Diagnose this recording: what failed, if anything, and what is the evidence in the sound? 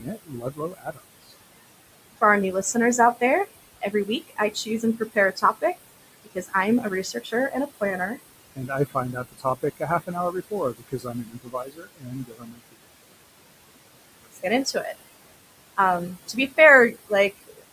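The background sinks between phrases and swells under the speech. These are noise suppressor artifacts from call processing: frame by frame, bands judged to be steady noise are pulled down by about 20 dB against room noise sitting about 15 dB below the speech.

Soft consonants and word endings sound swallowed at 0.00–1.31 s, 3.81–5.77 s, 6.24–8.18 s, 8.55–12.76 s (the longest, around two seconds affected), 14.22–14.76 s, 16.28–16.53 s and 17.47–17.63 s. This is speech cut by the noise suppressor, which mistook quiet speech for noise and cut it by about 12 to 21 dB.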